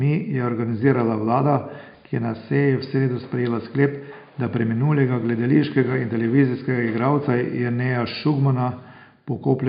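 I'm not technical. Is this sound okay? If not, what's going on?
Yes, nothing in the recording points to a technical problem; the faint noise of the room in the background sits far beneath the speech and is simply part of where it was recorded.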